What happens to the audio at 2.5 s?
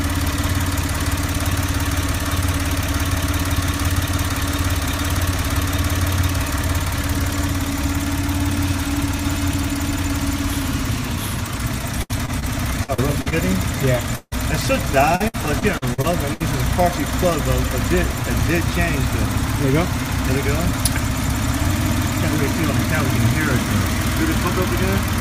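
Nothing goes wrong at 2.5 s; the audio there plays through intact, with no dropout, click or other fault.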